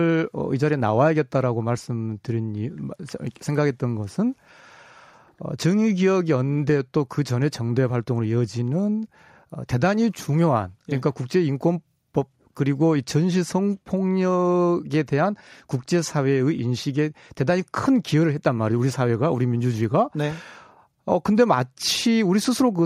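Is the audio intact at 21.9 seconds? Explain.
Yes, the speech at 21.9 seconds plays through intact, with no fault to be heard at that moment.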